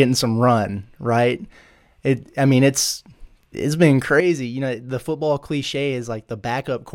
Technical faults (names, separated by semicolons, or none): sudden gain jump